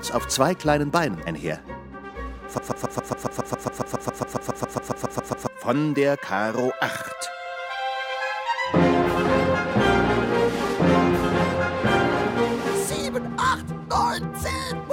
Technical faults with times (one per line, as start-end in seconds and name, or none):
2.58-5.47 broken-record loop